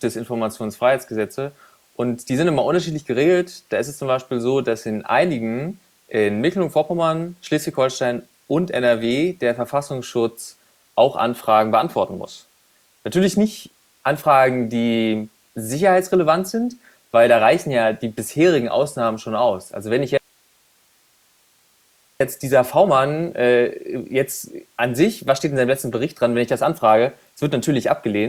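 At 20.18 s the speech drops out abruptly and doesn't return until 22.20 s, a gap of about 2.03 s. It's an audio dropout to a faint residue. The gap isn't silent. It holds only hiss, sitting roughly 40 dB below the normal speech level. That points to the signal likely being lost upstream while the rest of the chain stayed live, so you hear its noise floor instead of a clean pause or fade.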